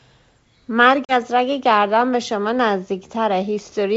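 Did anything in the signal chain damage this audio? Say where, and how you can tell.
Yes, packet loss on the ADPCM call, at the network stage, from 1.05 to 1.13 s. Around 40 ms of speech, a few packets' worth, drops to a hard-edged silence. The decoder's adaptive predictor and step size then no longer match the sender's, so the speech returns with some distortion before settling. The G.722 wideband coding at 64 kbit/s is intact.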